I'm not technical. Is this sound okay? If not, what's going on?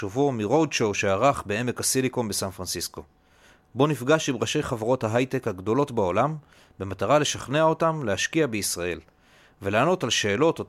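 Yes, nothing in this recording points to a technical fault.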